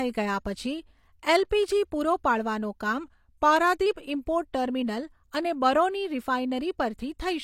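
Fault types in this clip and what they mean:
Drift correction step: from 3.04 s to 3.86 s, just after "પૂરો પાડવાનું", the speech slows by about 6.2 percent and drops about 111 cents, slightly more than a semitone, with speed and pitch moving together, then snaps back to normal. This is likely clock-matching software stepping the playback rate at once to rebalance its buffer, instead of adjusting gradually, so the section plays audibly flat and draggy.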